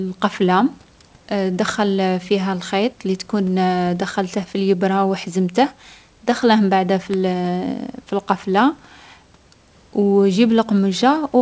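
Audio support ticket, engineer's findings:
Bit error spike, 3.15 s (just after "تدخل فيها الخيط التي") and 7.14 s. Probable component: memory or digital link in the capture/transport chain. A single flipped bit in one sample each time; the value jumps by a power of two and returns at once. Sound: two isolated sharp ticks, broadband, unrelated to the speech. The energy is confined below 8 kHz by the G.722 call path. Room noise is about 37 dB under the speech.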